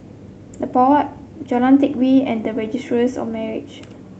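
No technical faults can be heard anywhere in the speech recording; the signal stays intact and continuous throughout.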